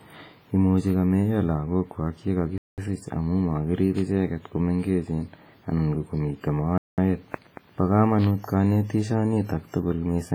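The whole speech clip has a washy, ringing quality with hiss that breathes along, likely from heavy WMA compression around 24 kbps smearing quantisation noise across long blocks. At 0.90 s, just before "kameiya lagookwak ye", there's a sharp bit error spike: one flipped bit jolts a sample and snaps back as a bright tick. From 2.58 to 2.78 s, between "imuchi kameiya lagookwak ye" and "amu makirip icheget ko", a gap between chunks cuts a 200 ms hole. That gap recurs at 6.78 s, fitting 4 s chunks. More spikes tick at 3.99 s, between "amu makirip" and "icheget ko mengechen", and at 8.24 s.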